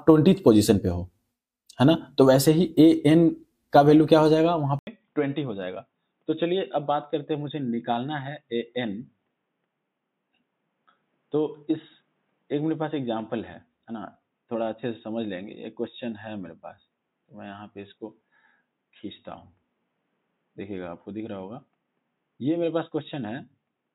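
From 4.79 s, after an 80 ms gap, the sound turns dull and about 10 dB quieter, with nothing above 3.8 kHz, likely because the input switched to a poorer device.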